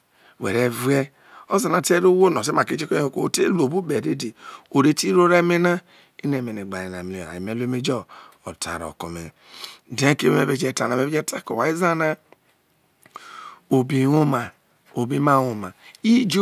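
Speech recording with no technical faults to report. Nothing in the audio points to a problem anywhere in its chain.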